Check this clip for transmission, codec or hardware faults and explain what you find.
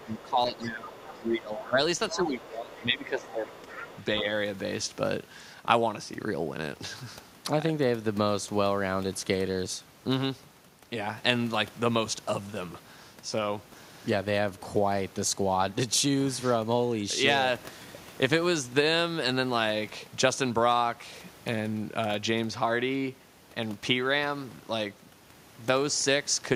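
Two problems show up, both in the first four seconds or so, and both point to echo cancellation on a speakerphone-style setup struggling while both sides talk.

Speech suppressed in double talk, from 0 to 1.8 s and again from 2.11 to 3.55 s: the talker's level keeps dipping, at worst by about 15 dB. The likely cause is the echo canceller hearing loudspeaker playback and local speech at once, failing to tell them apart, and turning everything down together.

The other side's voice leaking through comes in six scraps: 1.04 to 1.21 s, 1.56 to 1.67 s, 2.09 to 2.5 s, 2.79 to 2.83 s, 3.22 to 3.32 s and 3.51 to 4.05 s. A second voice sits underneath, well below the main talker, roughly 15 to 25 dB down. That's most likely leftover loudspeaker sound that the canceller didn't fully remove from the microphone.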